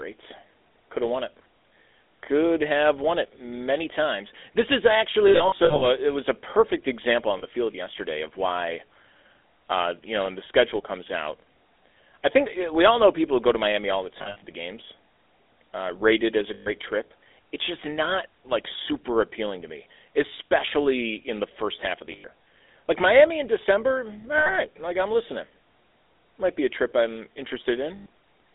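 Throughout the speech, the GSM full-rate codec is plainly audible. The sound is consistent with 13 kbps full-rate coding. The codec rebuilds the voice from a vocal-tract model fed by a sparse, regularly spaced pulse excitation, which gives the speech a buzzy, gravelly texture. The line band runs from about 300 Hz to 3.6 kHz, so the lows are thin and nothing above the top edge survives.

Lost GSM frames occur at seven points. From 5.28 to 5.84 s, about 280 ms of audio is missing in scattered dropouts, with no single run much beyond 70 ms. A short 40 ms loss follows at 7.38 to 7.44 s. From 14.18 to 14.43 s, about 180 ms is lost in scattered runs. Single losses fall at 16.54 to 16.68 s (120 ms), 22.12 to 22.26 s (120 ms), 24.38 to 24.58 s (80 ms) and 27.96 to 28.06 s (100 ms). In each gap the decoder repeats the last good frame's parameters, so the sound hangs as a rough, metallic ring instead of cutting out.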